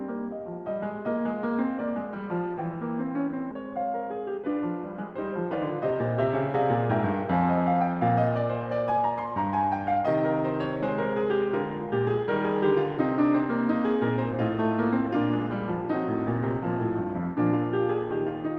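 A music clip with two timing faults. At 3.51 s there is a skip ahead: about a second of music is dropped, likely discarded while later audio was already queued, and playback joins the two sides almost directly. On a waveform this shows as an abrupt seam with no silent gap, and a spectrogram shows harmonic lines breaking off and resuming out of step. Shortly after, from 4.07 to 4.49 s, a jitter buffer speed-up trims short pitch-period pieces many times in a row to shed excess delay, about 40 ms in all. The music runs at 107% speed at unchanged pitch and the tempo briefly rushes. A spectrogram shows note onsets packed slightly closer together, while the waveform has fewer cycles than the original over the same stretch.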